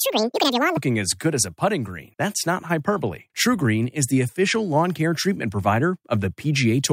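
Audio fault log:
0.00–0.77 s: section at the wrong speed. Speech plays at double speed, pitch raised about ten semitones, until "as good as a". Likely caused by playback against a mismatched clock.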